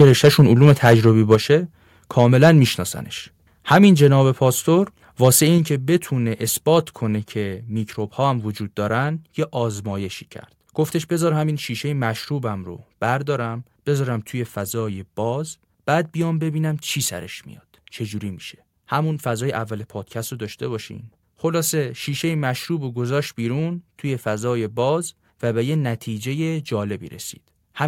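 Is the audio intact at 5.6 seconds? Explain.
No. At 5.58 s the speech and its background fall together by about 4 dB in a single step, and the lower level holds afterward. This is a microphone volume stepped down, likely the call software cutting the device's input volume because it judged the signal too loud. A gradual automatic gain control would fade the level over a stretch of audio. A dropout would leave a gap and then return to full level. Here there is one instant drop that stays down.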